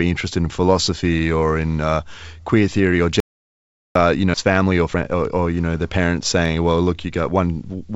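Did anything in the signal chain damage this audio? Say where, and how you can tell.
Yes. There is an audio dropout to silence from 3.20 to 3.95 s, right after "uh queer theory or". The gap is silent with no room tone, about 0.75 s long. The likely cause is lost input at the device or converter, with the recorder writing silence.

At 4.34 s there is a skip ahead in the network and jitter-buffer stage. The audio jumps forward with no gap and no fill. Roughly a second of material is missing, and the two sides are spliced almost directly. The buffer discarded audio to cut delay.

From 4.43 to 6.05 s a jitter buffer speed-up follows in the buffer stage. The speech runs about 18% fast at unchanged pitch and sounds hurried. The receiver trimmed repeated pitch-period slices, roughly 0.3 s in total, to drain the excess delay. This happens on a G.722 call path with nothing above 8 kHz.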